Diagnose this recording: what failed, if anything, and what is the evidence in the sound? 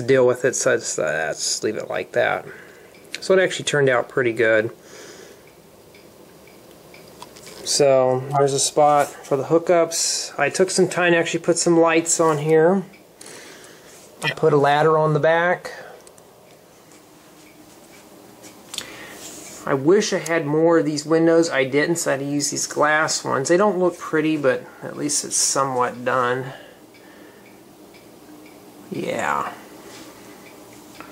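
The codec stage failed, with corrupt frames decoded in two places. A loud burst of misplaced energy runs from 8.30 to 8.49 s, about 0.19 s long, consistent with a short run of adjacent damaged frames. A shorter blip follows from 14.24 to 14.33 s, about 0.09 s, which fits a single bad frame. Both peak around -5 dBFS. Flipped bits in the compressed data gave the decoder wrong gains or codes. It played them anyway, putting energy at the wrong frequencies.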